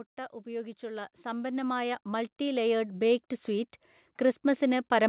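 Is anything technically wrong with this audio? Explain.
Yes. From 0.43 s to 4.2 s there is automatic gain rising. The automatic gain control judged the input too quiet and raised its gain steadily, by about 14 dB over nearly four seconds. The speech and the background noise swell together, so the room seems to creep closer rather than the talker simply speaking louder. The band-limited sound, with nothing above 4 kHz, fits a G.711 mu-law call path at 64 kbps.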